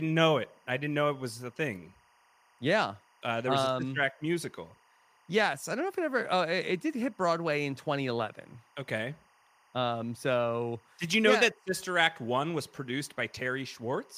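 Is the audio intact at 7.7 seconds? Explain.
No. Timecode bleed runs throughout, so at 7.7 s linear timecode leaking into the audio chirps and warbles well below the speech, alternating between tones around 1 and 2 kHz rather than holding one steady tone.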